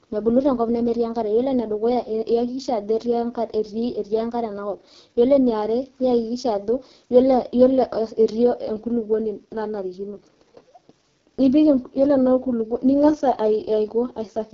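Speech, passed through the AMR wideband (HD Voice) codec for its whole length. It sounds rough and raspy, which fits the lowest 6.6 kbit/s mode. Nothing remains above 6.9 kHz.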